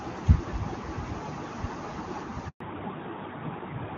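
At 2.48 s the speech cuts to silence for 120 ms, until 2.60 s: a handover gap, with no frames arriving while the call switched networks. From 2.60 s onward, everything above 4 kHz is gone and the speech sounds duller, a fallback to narrowband from the earlier clear HD Voice sound, which fits a move from high-rate AMR-WB to AMR-NB.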